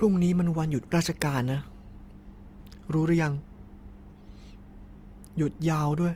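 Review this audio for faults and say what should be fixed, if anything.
Throughout the speech there is a plainly audible grainy, rough texture, likely from Opus compression in its CELT mode. Starved bands get filled with folded or noise-like content instead of being left empty. That separates it from MP3's swirling spectral holes. Content still reaches about 20.2 kHz, so this is not bandwidth narrowing. The damage fits a bitrate near 24 kbps. To prevent it, encode at a higher bitrate or keep a lossless master.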